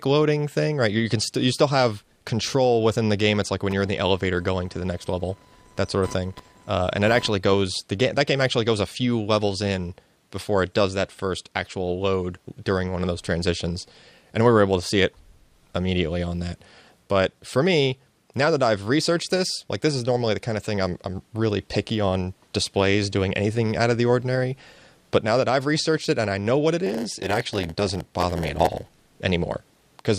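There are two separate problems in this audio. From 3.71 to 7.36 s there's computer activity noise: a chirpy, buzzing layer pulsing at around 1 kHz, sitting roughly 25 dB below the signal. It comes from processor, graphics or mouse load shifting the shared ground the audio circuit rides on, so it rises and falls with what the machine is doing rather than with the sound itself. Then from 26.86 to 28.93 s there's a block size mismatch (padded). One stage hands over shorter blocks than the next stage reads, and each block gets topped up with zeros, so a tiny gap lands in every block. That gives a 100 Hz buzz at the block rate and stretches playback to about 0.92 times normal speed, which fits the writing side delivering blocks around 92% the size the reading side expects.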